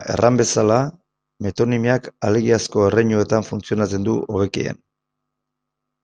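A short piece of speech, and there's nothing technically wrong to point to here: no dropouts, glitches or other faults turn up anywhere in it.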